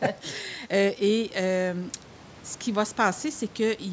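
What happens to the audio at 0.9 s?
At 0.9 s the speech runs on intact, with no dropout, glitch or distortion; only the ordinary call microphone processing and the faint room noise, about 27 dB below the speech, are present.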